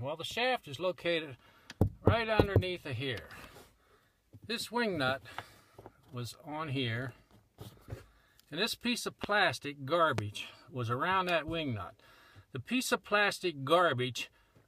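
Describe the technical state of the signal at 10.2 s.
At 10.18 to 10.21 s there's a single loud pop, around 15 dB above the surrounding level, with the sound carrying on underneath it. It's likely a sudden voltage step or pulse from a plug, switch, static discharge or driver glitch, shaped by the circuitry downstream.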